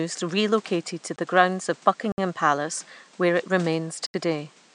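At 1.16 to 1.18 s, between "relocated to" and "grounds of", the speech drops to a block of digital silence lasting 20 ms. It returns from 2.12 to 2.18 s, just after "grounds of", for 60 ms. A third gap runs from 4.06 to 4.14 s, about 76 ms. Each time the output buffer was likely left unfilled and sent as zeros. The cut has no fade. Each is a short hole. Even the faint room noise, about 29 dB below the speech, vanishes inside them.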